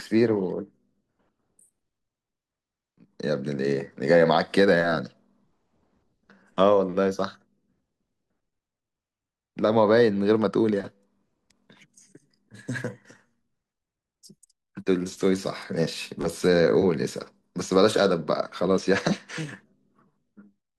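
A speech recording with no technical faults to report. Nothing in it calls for a time, a cause or a fix.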